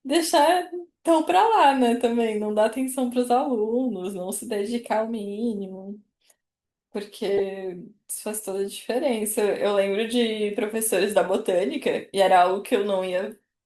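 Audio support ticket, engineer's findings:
Corrupt frame decoded, 7.38–7.40 s. Decoder accepted a couple of bit-damaged compressed frames and played them without concealment; misread gains and codes put energy at wrong frequencies. Heard as a short, fairly loud chirp-like blip over the speech.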